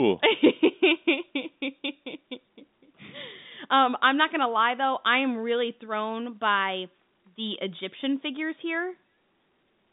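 No faults: the speech sits on an ordinary G.711 A-law telephone channel at 64 kbps, band-limited to about 150 Hz to 3.7 kHz with nothing above 3.8 kHz, as that line format dictates.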